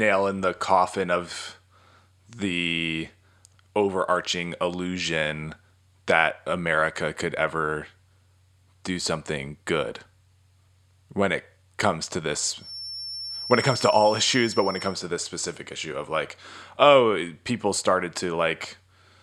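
From 12.56 to 15.00 s a feedback whistle sits behind the speech: a thin, steady tone at 5.4 kHz, roughly 10 dB below the voice, swelling and fading slowly in level. It likely comes from a loudspeaker-to-microphone loop held just at the edge of feedback.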